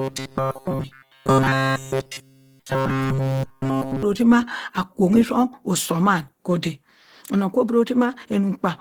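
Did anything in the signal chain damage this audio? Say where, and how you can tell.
Yes. From 0.01 to 4.0 s the speech turns into a rigid, metallic buzz pinned at 134 Hz across the whole span. This is likely robotic sound from repeated short buffers at the driver or buffer stage: each roughly 7.5 ms chunk is replayed while fresh audio is skipped.

Throughout the clip the speech sounds grainy, rough and noisy, with plainly audible codec damage although content still reaches up to about 20.4 kHz. This is likely Opus compression at the codec stage, in CELT music mode at 16 kbps, where thin bit allocation forces bands to be filled with folded or noise-like energy.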